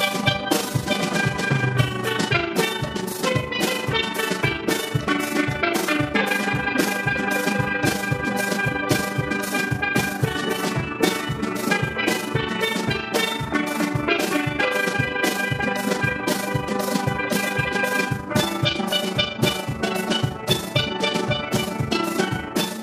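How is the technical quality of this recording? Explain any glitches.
The recording has one fault that runs the whole way through. An overlap-add ripple is present from start to finish. The audio was split into windowed frames and rejoined with overlaps that do not sum to a steady gain. The level dips about 6 dB once per frame, around 30 times a second. It sounds like a fast, rough flutter.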